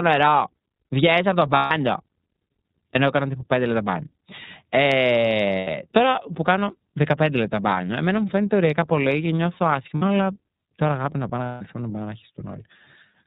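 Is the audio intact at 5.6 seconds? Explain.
No. From 5.58 to 5.68 s there is a dropout from lost iLBC frames. The roughly 90 ms gap fits three missing 30 ms frames. The decoder fills it by repeating the last pitch cycle mixed with noise, so it sounds like a briefly held, slightly buzzy vowel. Because each iLBC frame decodes on its own, the speech comes back cleanly right after the gap.

Around this moment, and across the whole clip, the iLBC codec is also plainly audible. Nothing above 4 kHz survives, and the speech has a rough, synthetic edge from the coarse excitation coding. The 30 ms framing points to iLBC's 13.33 kbps mode.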